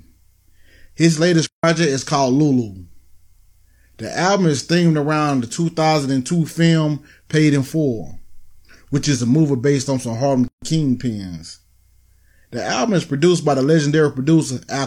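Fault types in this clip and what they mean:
Playback stall: At 1.46 s the speech just stops dead for about 170 ms, then picks up again at 1.64 s with "is called". That's the classic shape of a stall, the player likely running dry on buffered data or having its output thread held up, so it outputs silence until it catches up. It simply pauses mid-flow and carries on.
Gap at a join of encoded pieces: Around 10.48 s there's a short hole of about 143 ms in otherwise continuous speech, ending at 10.62 s. That points to two separately encoded chunks butted together without trimming, so the encoder's start-up delay and the padding on the last frame both survive as silence at the seam. The edges are smeared by the codec, and the speech resumes from where it stopped.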